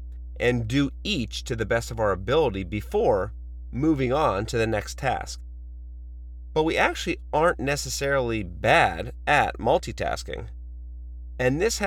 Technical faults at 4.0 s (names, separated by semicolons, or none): mains hum